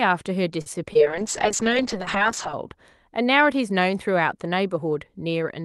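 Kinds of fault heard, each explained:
Short stall from a late packet: around 0.61 to 0.76 s a packet arrived late, the jitter buffer ran dry, and the receiver held the last sound for about 46 ms until it came. Nothing is lost, but the speech drags briefly with a slight buzzy dip.
Short concealed packet loss: at about 0.93 to 0.97 s roughly 20 ms of speech never reached the decoder in time. The receiver covered the gap by extending the preceding sound, then blended back, leaving a brief smear where a short consonant can disappear.
Call bitrate drop: from about 1.01 to 2.61 s the encoder was pushed from 40 kbps down to 6 kbps, staying at the floor for about 1.5 s. Opus codes far more coarsely at that rate and trims the highs, so the speech turns rough and muffled before recovering.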